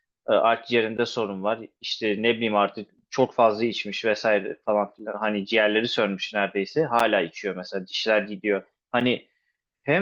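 Gap between stream segments at 0.97, 2.99, 4.99, 7.00 and 9.00 s: every 2 seconds, adjoining segments' time stamps fail to meet, so the player pads the join with silence. Each hard-edged hole, 4 to 12 ms long, briefly interrupts the speech without losing any of it.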